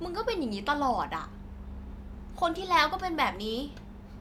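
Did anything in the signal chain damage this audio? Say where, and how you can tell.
No, nothing in the signal chain damaged this audio.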